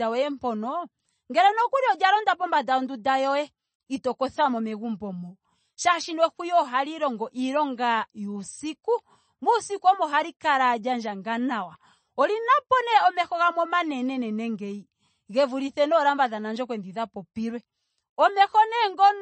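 MP3 compression, throughout: nothing reaches above 8.3 kHz, and the coding damage is plainly audible as a watery, swirling texture and smeared consonant attacks. This is likely an MP3 encoder starved of bits, consistent with roughly 32 kbps, cutting the treble and toggling weak frequency lines between frames.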